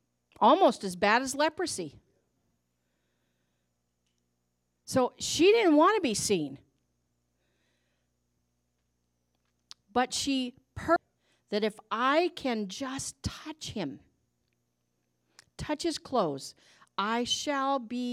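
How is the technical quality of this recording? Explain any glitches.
There's one glitch worth flagging. At 10.96 s the speech jumps abruptly with a tiny blip, landing on "that if I can". That's likely a stream segment skipped: one chunk failed to load, the player moved on to the next, and that stretch of audio is simply gone.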